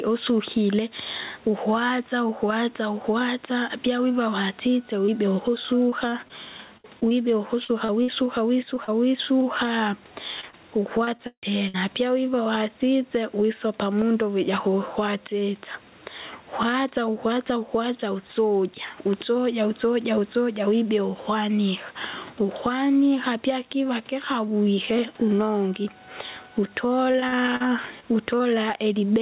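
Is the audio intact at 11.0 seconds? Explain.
No. From 10.41 to 11.76 s there's repeated packet loss: several dropouts, the longest about 157 ms, each patched by stretching the last sound, so it comes out choppy and robotic. The level also pumps by around 10 dB, likely from gain set way too high feeding a fast limiter.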